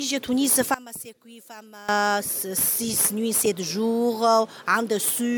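From 0.74 to 1.89 s the fault is one channel inverted: one side of the stereo pair has likely had its polarity flipped, so when the two channels are summed to mono everything they share cancels. The sound drops by about 19 dB across that stretch. What survives is only the difference between left and right, a faint remnant with the centre largely gone, until full level returns at 1.89 s.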